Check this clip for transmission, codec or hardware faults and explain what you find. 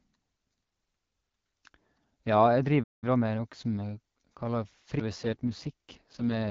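Four faults affect this speech clip, which travels over an AMR wideband (HD Voice) link at 12.65 kbit/s.

Playback stall, 2.83 to 3.04 s: the player likely ran short of data or was blocked, so the speech stops dead for about 190 ms mid-flow.

Time-compressed catch-up, 3.04 to 3.40 s: to clear its backlog the player cuts and cross-fades small slices, so speech runs 1.5 times faster at normal pitch.

CD skip at 5.00 s: the laser jumped to another turn of the spiral, giving a very brief mute and a sudden jump in position.

AMR rate drop, 5.13 s to the end: the network pushed the codec down from 12.65 to 6.6 kbit/s for error protection, so speech turns rougher and more synthetic without any gap.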